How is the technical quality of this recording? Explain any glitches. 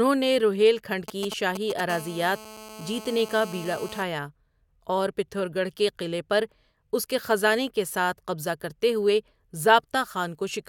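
The recording is marred by two bursts of mobile-phone interference in its first few seconds.

From 1.08 to 1.81 s, right after "نے روہیل کھنڈ", a galloping dit-dit-dit of short buzzes cuts across the speech, at roughly 10 dB below it. These are GSM signalling bursts: a nearby 2G phone sends brief groups of radio pulses while it negotiates with the network, and the audio circuitry rectifies them into short 217 Hz buzzes.

From 1.90 to 4.03 s a steady, hard, raspy buzz at 217 Hz, rich in harmonics, sits about 16 dB below the speech and is unrelated to it. This is GSM phone buzz: once the phone enters a call it transmits continuously in 217-per-second bursts, which the circuitry demodulates into a constant tone.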